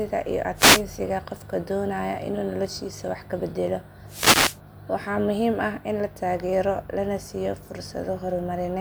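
At 0.55 s there is a wireless microphone noise hit lasting about 0.29 s, and a second, longer one follows from 4.07 to 4.60 s. Each is a brief swish of static, heard as the FM radio link fades and the receiver's noise rises over the signal. On a spectrogram each shows as a broadband haze filling the whole frequency range. In the waveform it appears as a dense noisy patch obscuring the speech envelope.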